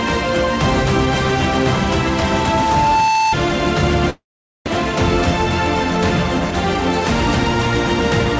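From 1.87 s to 3.35 s a loudspeaker feedback squeal rises out of the audio. A microphone is picking up the loudspeaker it feeds, and at 885 Hz the loop gain exceeds one, so that single tone reinforces itself on each pass. It swells over roughly a second and a half until it is about as loud as the signal, then stops. On a spectrogram it is one bright horizontal line at 885 Hz, thickening as it grows. In the waveform the envelope bulges steadily over that span.

At 4.10 s the audio breaks off in what is likely a long network dropout. About 0.4 s of the audio never arrives. The receiver fills the gap by stretching the last sound into a fading buzz or hiss, which gives way to silence before the audio resumes at 4.70 s, further on, with the missing stretch skipped. The jump in playback timing is roughly 150 ms. The waveform shows a decaying tail running into a flat stretch. On the spectrogram, smeared, blurred texture turns to an empty column. 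Throughout, the call path's band limit leaves nothing above 8 kHz.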